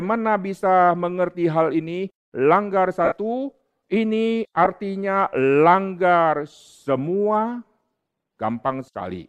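At 3.05 s, lost LE Audio frames break the speech for about 67.5 ms, until 3.12 s. That fits nine 7.5 ms frames going missing. The LC3 decoder fills the gap by repeating the last spectrum with scrambled signs, then fading it. The speech smears into a brief noisy hiss that sinks away. At 4.65 to 4.67 s, a shorter 15 ms loss, about two frames, gives only a rough blip.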